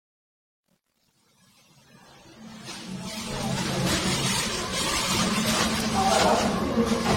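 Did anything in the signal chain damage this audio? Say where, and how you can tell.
Yes. At the codec stage, the whole clip sounds like it was encoded and decoded repeatedly, most likely generation loss from around seven passes through AAC-LC at 64 kbit/s. Each re-encode quantises the material again on a shifted frame grid, so the damage stacks: nothing survives above 16.5 kHz, the sound has a swirly, hollow smear heavier than a single 64 kbit/s encode would leave, and attacks are blurred rather than crisp.

At a sample-format or gain stage, the fade-in from 0.0 s to 3.78 s shows truncation distortion on a fade. The fade ends at 3.78 s, but it was computed at an effective 10-bit resolution with no dither. The worst stretch is 0.0 to 2.89 s, where the quiet level spans only a few quantisation steps. The waveform collapses into coarse square steps there, so the start sounds gritty.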